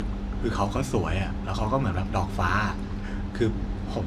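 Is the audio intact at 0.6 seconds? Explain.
Yes, the audio is intact at 0.6 seconds, with no audible fault at that moment.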